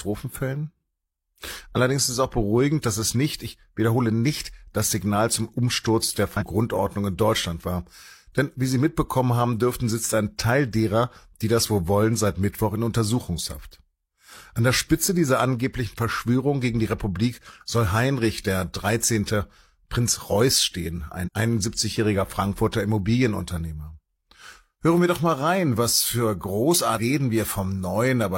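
At 6.37 s, 21.23 s and 26.94 s, damaged data in a compressed stream breaks the speech. Each glitch lasts about 60 ms. Corrupt frames make the decoder lose sync and break up briefly.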